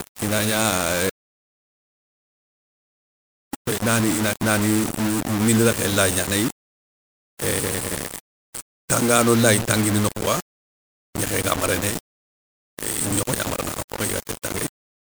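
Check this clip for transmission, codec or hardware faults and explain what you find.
Two faults are present in the speech.

Low bit depth without dither runs throughout. The sound is likely rounded to about 4 bits with no dither, so the error tracks the signal. Quiet passages turn gritty and grainy, with distortion sitting only around 10 dB below the speech.

An audio dropout to silence runs from 1.10 s to 3.53 s. The speech cuts out mid-flow and about 2.44 s passes in complete silence with no room tone, consistent with the input being lost while writing continued. Whatever was spoken then is gone.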